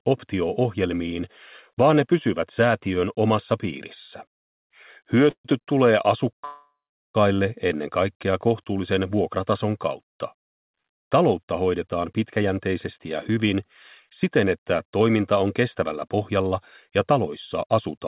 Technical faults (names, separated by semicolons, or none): call audio freeze; short stall from a late packet; jitter buffer speed-up